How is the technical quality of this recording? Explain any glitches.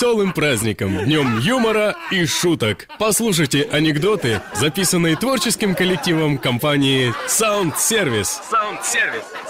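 The recording has a steady timing problem plus a sprinkling of tiny dropouts, so there are small hiccups all the way through.

Clock drift between sender and receiver runs the whole clip. The sending end's clock is running roughly 3% slow, so the receiver's buffer keeps draining and it has to pad things out to avoid running dry. You hear it as a faintly uneven, slightly dragging pace.

Repeated timing corrections are how that padding happens, from about 0.08 s to 9.45 s. The receiver repeats short slivers of audio, all in the same stretching direction, adding around a fifth of a second overall and playing at about 98% speed. Each edit is small.

Scattered short gaps come in two clusters: roughly ten between 0.63 s and 5.74 s, and about five between 6.83 s and 8.99 s. Each is a lost or late packet of around 10 ms or less, filled by extending the preceding sound, so you get brief ticks or smears.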